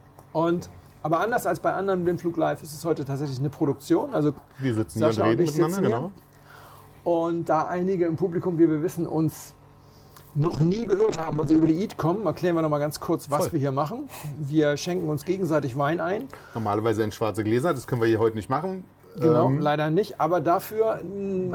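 At 10.43 s there's a call bitrate drop lasting until about 11.77 s. The link's bandwidth estimate collapsed, so the encoder was pushed down to a tiny bit budget, and the sound suggests a fall from around 48 kbps to roughly 7 kbps. It bottoms out for about 1.28 s. During that stretch the top end gets lopped off and the coding turns coarse, so things go muffled and a bit watery before recovering.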